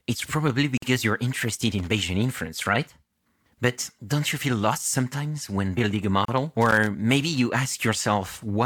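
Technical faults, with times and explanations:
0.77–0.82 s, gap at a join of encoded pieces: the speech drops into a silence of about 49 ms and resumes where it left off. Two separately encoded segments were butted together untrimmed, so the encoder's start-up delay and final-frame padding remain as dead air. The edges are smeared by the codec.
1.78–1.87 s, loose connector crackle: a short, irregular burst of scratchy crackle lasting about 90 ms. A worn or dirty contact is rapidly making and breaking, chopping the signal on and off, with pops where any DC on the line jumps.
6.25–6.28 s, gap at a join of encoded pieces: a second, shorter hole of about 33 ms at another untrimmed splice. Leftover encoder delay and padding briefly silence the speech before it continues seamlessly.
6.61–6.87 s, loose connector crackle: a longer crackle burst of about a quarter second. The intermittent contact chatters, breaking the signal into ragged fragments.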